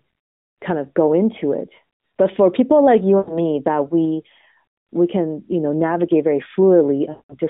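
Speech carried over a narrowband AMR mobile line, limited to about 150 Hz to 3.7 kHz, shows lost AMR speech frames at 3.18 to 3.39 s and 7.10 to 7.37 s. The decoder stretches the last good frame and fades it, so the spectrogram shows smeared bands dimming to a gap and the waveform envelope tapers. This fits about 100 ms and 200 ms of missing frames.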